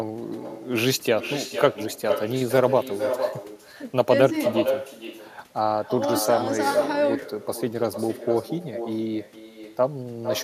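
From start to finish the speech carries an echo with no canceller: the far end's loudspeaker feeds its microphone, and the returning copy arrives about half a second late, only about 7 dB below the direct signal, sounding thinner, so every phrase is trailed by itself.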